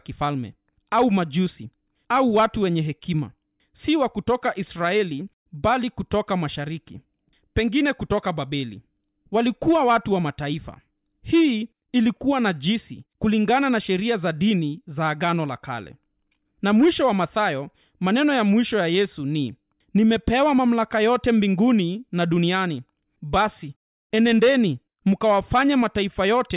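Listening through the speech recording, nothing stood out as a technical problem at any point.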